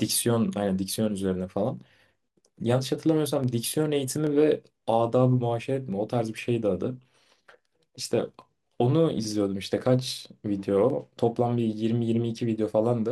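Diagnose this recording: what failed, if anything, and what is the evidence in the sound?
A click recurs every 0.83 s through the speech, from 0.11 s to 12.56 s, about fifteen in all. These are clock drift buffer slips at the buffer stage, likely two clocks a few hundred ppm apart, forcing periodic drops or repeats of samples.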